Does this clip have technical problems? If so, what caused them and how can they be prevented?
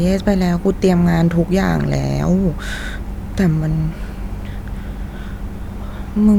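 No, nothing in this speech recording points to a technical fault, so there's nothing to trace or prevent.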